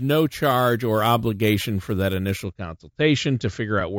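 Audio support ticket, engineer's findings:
Imaging from sample-and-hold upsampling, 0.0–2.44 s: bright metallic fizz tracking the speech, image band 8–16 kHz, about 21 dB down. Points to a 16 kHz source sample-held up to 44.1 kHz in the resampler, with no smoothing filter.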